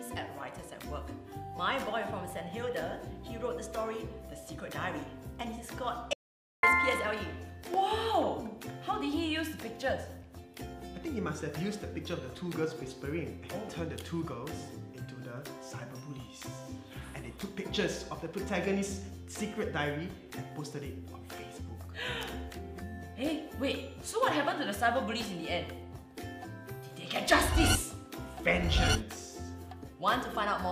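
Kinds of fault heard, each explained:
Audio dropout to silence: from 6.13 s to 6.63 s the sound cuts off mid-flow into half a second of silence, with no room tone, then resumes; likely the input was briefly lost, through a disconnect, failed link or mute, while silence kept being written, so that half second is gone.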